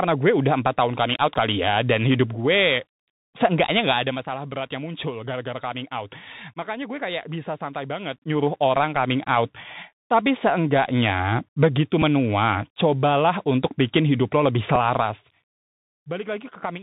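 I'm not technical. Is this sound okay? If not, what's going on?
No. The whole clip has passed through a Bluetooth headset link using the CVSD codec, the older phone-call quality. Nothing above about 4 kHz gets through, so the speech sounds boxed in, s sounds come out scratchy, and a grainy hiss sits underneath. That hiss is steady throughout, not in bursts like dropouts.

Zipper noise appears at 3.90 to 4.27 s and 14.98 to 15.34 s as the level drops, and at 8.11 to 8.47 s as it rises. The volume moves in roughly twenty small jumps a second instead of gliding, so you hear a quick ticking or zipping ride on the voice.

A Bluetooth headset packet was repeated at 12.02 s and again at 14.76 s. Each time one tiny slice of audio went missing and the headset replayed the previous slice. This leaves only a single small tick, not the steady buzz that a longer run of lost packets would make.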